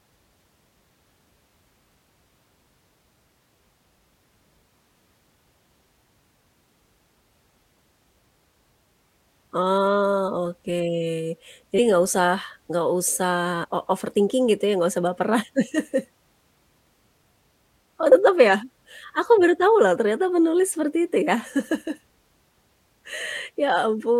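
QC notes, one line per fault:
2.66, 11.78, 13.63 to 13.65, 18.12 and 23.19 s: compressed frames skipped. Each time, a few frames (roughly 30 to 100 ms) never play, so the speech jumps ahead, as before "enggak usah enggak usah" and before "o overthinking gitu ya".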